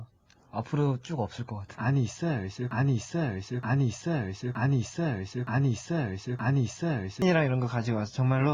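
From 2.71 to 7.22 s, a broken-record loop: one 0.92 s fragment plays five times, likely from a stalled stream, seen as identical repeating waveform blocks.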